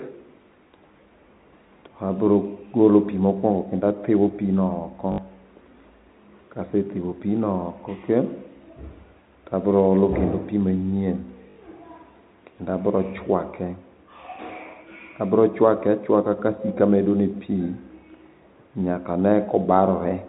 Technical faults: packet loss with last packet repeated

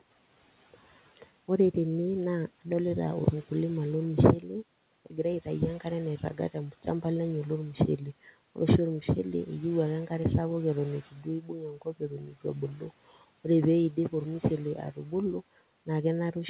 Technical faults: speech cut by the noise suppressor

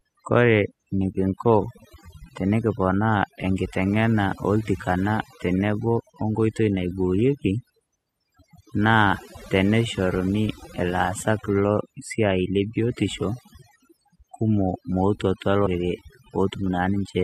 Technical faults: overdone noise removal; compressed frames skipped

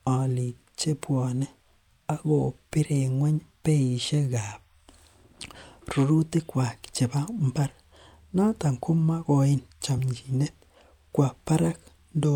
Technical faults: compressed frames skipped

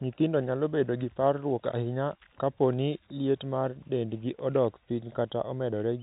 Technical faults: none

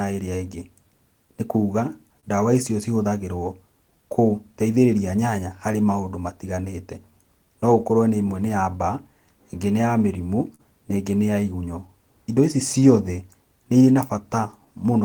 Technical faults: clock drift between sender and receiver; repeated timing corrections; short stall from a late packet

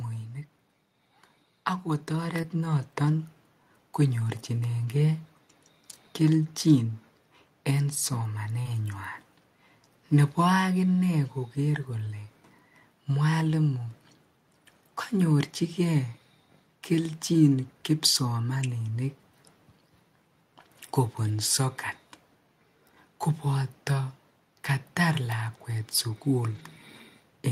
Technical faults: automatic gain rising; short concealed packet loss; lost packet rebuilt from error correction

